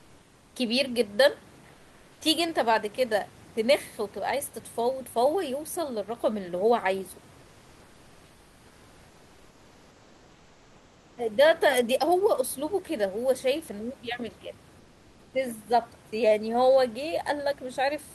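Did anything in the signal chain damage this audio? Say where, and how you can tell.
Yes. Comfort noise replaces the background at 0.00–0.55 s, 1.71–2.21 s, 7.41–11.17 s and 14.79–15.33 s. In each pause the room noise turns flat and featureless, about 2 to 3 dB quieter. This is a codec stage, likely Opus DTX, where the receiver synthesises filler noise.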